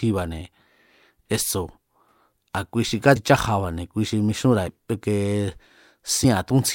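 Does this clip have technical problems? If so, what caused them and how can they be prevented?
Yes. Whole compressed frames are being skipped: frames of 26.1 ms went missing from the file or were rejected by the decoder as damaged, so playback jumps ahead. This speech clip skips roughly 100 ms at 3.15 s, just after "a̱ kui xi", about 70 ms at 4.67 s, and around 300 ms at 6.23 s. Because adjacent frames overlap, each jump is heard as a short smeared blip with a chunk of speech gone, not a sharp click. Prevention: protect the stream with error checking and retransmission or redundant frames, and verify file integrity before decoding.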